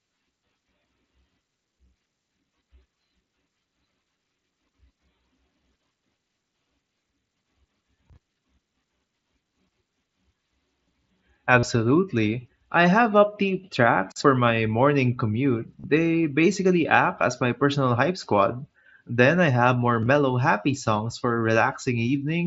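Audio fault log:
11.59–11.63 s and 15.80–15.84 s, concealed Bluetooth headset packet loss: consecutive voice packets from the headset never arrived, so the phone filled each gap of about 40 ms by looping recent waveform. This gives a short buzzy tone at full level, then a slight warble as speech resumes.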